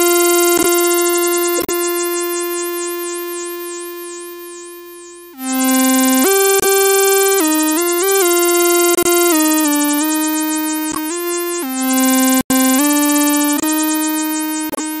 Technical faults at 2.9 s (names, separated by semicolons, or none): none